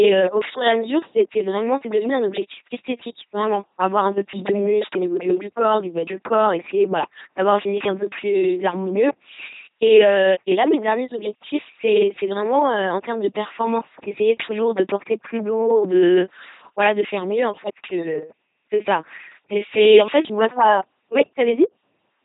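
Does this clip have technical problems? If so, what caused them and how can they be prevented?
Yes. Throughout the clip the speech has been passed through an LPC-10 vocoder, and the heavy damage fits its 2.4 kbit/s rate. Instead of carrying the waveform, the codec sends only a short set of vocal tract filter settings plus a voiced-or-unvoiced flag, then rebuilds each moment from a buzzing pulse train or from noise. The result is a flat, mechanical robot voice with buzz and hiss where voicing is misjudged, and nothing above 3.8 kHz. To prevent it, use a modern higher-rate speech codec such as Opus rather than a legacy parametric vocoder.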